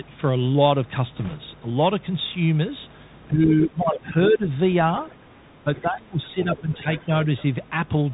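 A speech recording carries a steady mains hum at 50 Hz, about 25 dB below the speech. It is a fixed low tone rather than rumble or wind, so it points to a ground loop or nearby transformer feeding the power line into the signal. Over the whole clip, the Bluetooth CVSD headset codec leaves nothing above 4 kHz, a granular hiss under the voice, and scratchy s sounds. This slope-overload grit, not the smeared, warbling artefacts of a perceptual codec, fits a 64 kbps link. From 1.17 to 1.36 s, bit errors on a Bluetooth voice link add a rushing crackle at an error rate of about 1.5%. Because every flipped bit carries equal weight and fades quickly, there are no sharp clicks like those of dropped packets. Speech is suppressed in double talk from 3.31 to 4.48 s, dipping by up to about 15 dB, and from 5.64 to 6.87 s, dipping by up to about 20 dB. This is the likely result of an echo canceller muting both talkers at once. 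The other side's voice leaks through, likely from a loudspeaker echo the canceller missed, at 4.27, 5.05, 5.76, 6.55, 6.96 and 7.24 s. These scraps run from roughly 10 to 30 dB below the speech and sound like a second voice rather than a delayed copy of the talker.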